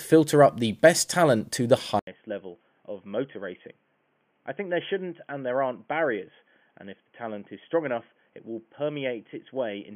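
At 1.99 s the speech cuts out for 80 ms, then returns about 10 dB quieter, dull and boxy, with nothing above 3.3 kHz and new background noise roughly 40 dB down. That combination of silence, level and noise points to an input switched to a poorer device, likely, rather than a plain filter.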